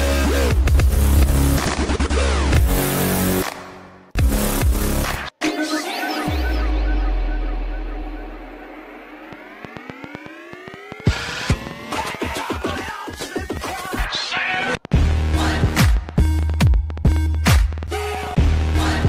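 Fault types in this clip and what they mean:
Train of clicks: From 9.33 s to the end, a series of near-identical sharp ticks rides over the sound at about 7 per second, spaced unevenly and peaking somewhat louder than the audio itself. They continue through quieter stretches too, which sets them apart from codec artefacts that follow the signal. Unlike a single dropout pop, this is a sustained stream, likely interference from nearby equipment or a faulty connection or power supply.
Call bitrate drop: Between 13.2 s and 15.27 s the coding rate falls from 128 kbps to 16 kbps and stays at its lowest for about two seconds. The sound turns coarse and watery, and the top end is trimmed so it sounds muffled, then clears as the rate recovers. Unlike the clicks, this adds no discrete events. It is a temporary loss of detail and brightness across the whole sound.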